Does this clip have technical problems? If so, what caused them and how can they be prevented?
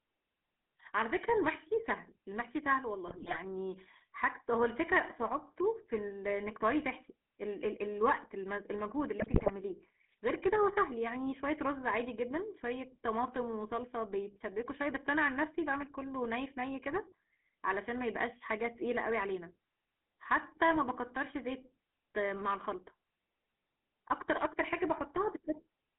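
Yes. The whole recording carries GSM full-rate codec coloration: the speech is squeezed into roughly 200 Hz to 3.4 kHz and has a buzzy, gravelly grain, which fits a 13 kbps GSM full-rate encoder. Unlike plain narrowband telephone filtering, which only dulls the sound, this codec rebuilds the voice from a vocal-tract model driven by a coarse pulse train, so the roughness sits inside the voice itself. Encoding with a modern wideband codec such as AMR-WB or EVS would prevent it.

There are also GSM bit errors, from 3.08 to 3.37 s and from 9.18 to 9.51 s, where the speech breaks into squawks, pops and gargling. Corrupted filter, pitch and gain values reached the decoder on a weak radio link, so frames came out with bent spectra and sudden level jumps. Packet loss would instead leave gaps or smeared repeats of the previous sound, not these harsh, distorted bursts. Better signal coverage and stronger channel error protection would prevent these errors.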